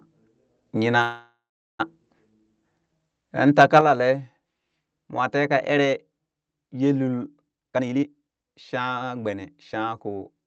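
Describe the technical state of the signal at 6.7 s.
At 6.7 s the speech is intact, with only the steady band-limited character of the call path it passes through and no fault present at that moment.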